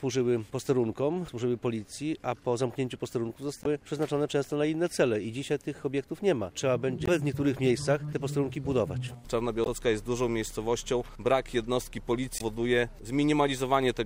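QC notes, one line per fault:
3.62–3.66 s, 7.04–7.09 s, 9.63–9.67 s and 12.37–12.42 s: damaged data in a compressed stream. Each one is a short blip of about 44 ms where the sound breaks up. Some bytes in the encoded stream are wrong, so the decoder misreads those frames, loses its place, and has to hunt for the next valid frame header before playback settles again.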